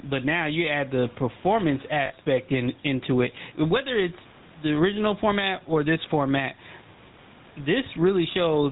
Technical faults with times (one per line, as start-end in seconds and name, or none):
0.00-8.71 gain pumping
0.00-8.71 GSM full-rate codec
2.06-2.12 lost GSM frames